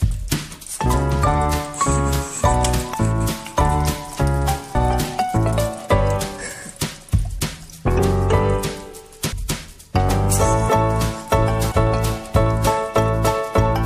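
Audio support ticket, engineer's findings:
Compressed frames skipped at 2.93, 4.74, 9.31, 10.68 and 11.71 s. Decoder drops whole frames (damaged or missing), so playback jumps ahead: roughly 70 ms, 100 ms, 400 ms, 300 ms, 200 ms lost, with 23.2 ms frames.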